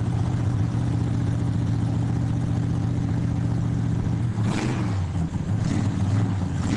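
A drift correction step runs from 4.22 to 4.93 s: the sound abruptly plays about 6 percent fast, raising pitch by roughly 104 cents, slightly more than a semitone, and then drops back to its original speed and tuning. Speed and pitch shift together for this stretch, which points to a varispeed adjustment. The likely cause is clock-matching software changing the playback rate in a single step to drain a buffer that had drifted too full.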